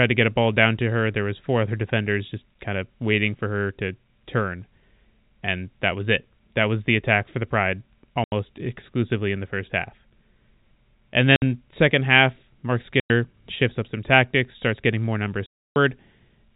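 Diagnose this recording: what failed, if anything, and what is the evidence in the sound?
The network stage failed. You get packet loss filled with silence: the speech drops out cleanly at 8.24 to 8.32 s, 11.36 to 11.42 s, 13.0 to 13.1 s, and a longer 15.46 to 15.76 s hole. Each gap, 80, 60, 100 and 300 ms, is a multiple of 20 ms, which fits 20 ms packets. The receiver plays silence instead of concealing, so every gap has hard edges. The band-limited G.711 telephone coding underneath is working as it should.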